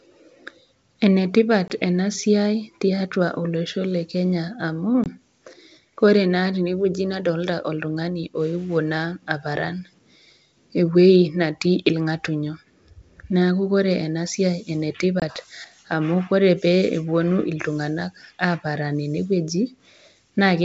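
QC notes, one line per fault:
1.68–1.70 s, 5.04–5.07 s, 15.20–15.24 s, packet loss on an ADPCM call: each is an abrupt 20 ms dropout followed by briefly, slightly distorted speech. This fits a single lost G.722 packet being replaced by silence, leaving the decoder's predictor and step size out of step with the sender's until they re-align.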